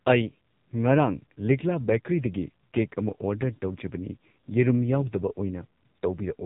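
AMR narrowband mobile codec damage runs through the whole clip. Nothing above 3.8 kHz survives, and the speech is heavily coloured: buzzy, thin and synthetic, as the vocal-tract model is driven by too few pulses, which fits a low mode near 5.9 kbps.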